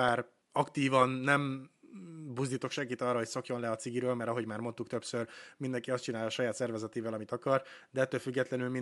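Nothing in this speech recording stood out on listening, with only a faint room background sitting about 50 dB beneath the talking.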